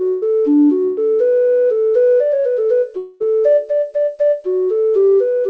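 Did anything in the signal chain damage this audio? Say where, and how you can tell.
Yes. At the network stage, a burst of packet loss hits at 0.08 to 0.24 s and again at 0.84 to 0.99 s. Each time, about 140 ms of audio is replaced by concealment that stretches the last sound and fades it, then resumes later. That fade, not a hard cut or click, marks packet loss.

The fault at 2.97 to 3.26 s is likely a long network dropout. About 0.24 s goes missing and concealment fills nearly all of it, fading without reaching silence. It is longer than the bursts, and the high band stays cut above 8 kHz, which fits a 64 kbps wideband call codec such as G.722.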